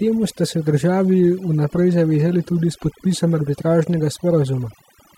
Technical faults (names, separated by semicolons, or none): overdone noise removal